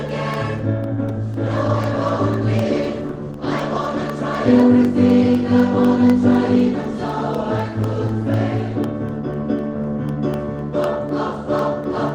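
Periodic USB or driver dropouts begin at 0.09 s and continue to the end, one every 0.25 s. At each interval something stalls the USB bus or audio driver, and a sliver of audio is replaced by silence, giving a steady tick four times a second wherever sound is present.

A call bitrate drop runs from 0.95 s to 4.15 s. The connection's bandwidth estimate fell, so the encoder spent far fewer bits, a fall from about 32 to 18 kbps. For roughly 3.1 s at the lowest rate, the sound turns coarser and rougher before recovering.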